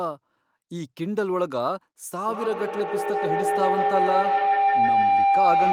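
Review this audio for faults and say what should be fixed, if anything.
A feedback howl starts at 2.1 s and runs to the end of the clip. The microphone is picking up a loudspeaker that plays the same call. Each pass round that loop comes back louder, not quieter. The sound narrows to a tone near 700 Hz, pulsing roughly every 150 ms, which is the loop's round-trip delay. At its peak it sits about 5 dB above the speech. To prevent it, keep only one device joined to the call in the room, or mute the second device's microphone and speaker.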